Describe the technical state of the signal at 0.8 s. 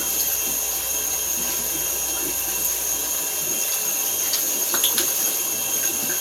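At 0.8 s the sound is intact, with no dropout, clipping, glitch or other fault.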